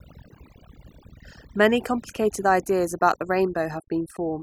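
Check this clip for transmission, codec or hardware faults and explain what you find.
Overdone noise removal runs through the whole speech clip. A noise reducer set too aggressively pushes individual frequency bands down or out whenever they sit near its noise estimate, taking quieter speech detail with them. The background in pauses drops and breaks up into twinkling specks.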